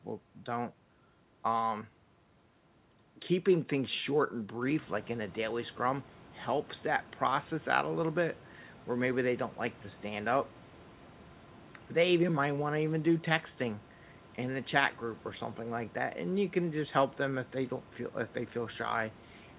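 Nothing's actually wrong in this bit of speech: the room's background noise picks up by about 12 dB somewhere around four and a half seconds in but still sits about 24 dB under the talking, and the call path's missing top end, with nothing above 4 kHz, is just what you'd expect from a narrowband link like G.711 mu-law.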